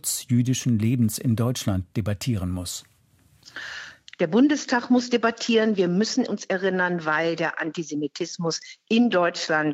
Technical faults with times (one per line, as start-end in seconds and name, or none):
none